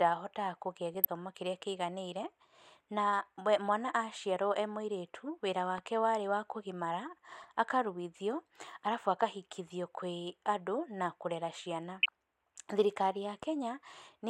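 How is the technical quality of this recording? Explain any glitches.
The speech comes through with two kinds of glitch: three short bursts of DAB burbling and two loud pops.

The DAB burbling hits at 0.94–1.06 s, 7.40–7.44 s and 12.03–12.09 s. Weak reception lets bit errors slip into the MP2 data, so single sub-bands jump around, giving brief blips of noise.

The loud pops land at 5.78–5.80 s and 13.43–13.45 s, each a single sharp click roughly 10 dB above the speech, which carries on underneath. They're likely a voltage spike from a switch or static.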